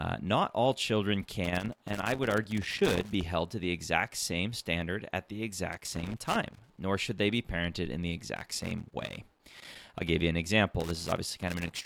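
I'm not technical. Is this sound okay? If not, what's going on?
No. Irregular crackling and scratching bursts cut into the speech from 1.44 to 3.23 s, 5.72 to 6.79 s, 8.36 to 10.16 s, and 10.80 s to the end. This is loose connector crackle: a worn or dirty plug contact flickers on and off, chopping the sound into pops.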